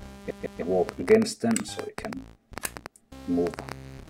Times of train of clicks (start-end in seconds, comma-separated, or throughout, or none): 0.89-3.73